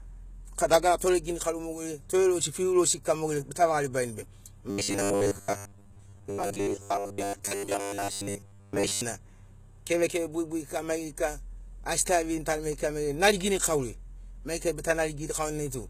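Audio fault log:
throughout: HE-AAC compression, likely, at a low bitrate around 20 kbps. The treble is rebuilt from copied lower bands, so s sounds turn gritty and lispy. On a spectrogram the upper band looks smeared and pasted.
0.98–1.01 s: pre-echo. Quantisation noise spread across the coding block leaks about 25 ms ahead of a sharp attack, so a short hiss precedes it and the onset sounds softened. The waveform shows a low noise smear before the transient instead of clean silence.
4.70–9.01 s: robotic sound from repeated short buffers. A 10 ms stretch of audio likely loops while most of the real signal is skipped, which imposes a rigid, metallic 100 Hz buzz. The spectrogram shows evenly spaced harmonic stripes at 100 Hz, and the waveform repeats identical cycles.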